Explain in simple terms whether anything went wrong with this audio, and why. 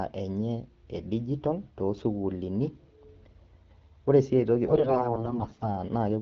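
From 4.66 to 5.76 s, AMR bit errors on a weak link corrupt the finer details of the voice coding, making the speech sound hoarse, scratchy and gargly.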